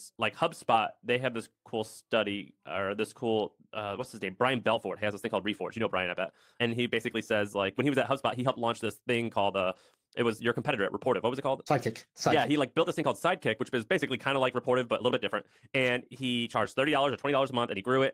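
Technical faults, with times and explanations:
3.87–4.05 s, lost packet rebuilt from error correction: between "study or this cool" and "his name", about 100 ms plays back rougher and noisier with no gap, which fits five separate 20 ms packets concealed from the low-bitrate redundant copies carried in the following packets.
4.65 s to the end, time-stretched section: the pace jumps abruptly to about 1.35 times faster while pitch stays unchanged, giving a rushed delivery. This is likely software compression of the audio to fit a target length, dropping short segments so pitch is preserved at the cost of continuity.
9.71–9.77 s, 10.61–10.71 s and 16.85 s, lost packet rebuilt from error correction: brief patches of about 40 ms, 60 ms and 20 ms turn grainy without dropping out, pointing to two, three and one lost packets filled from forward error correction data.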